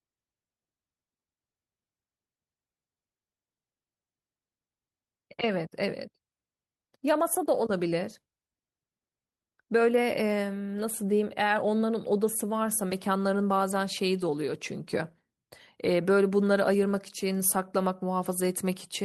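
No technical faults are audible.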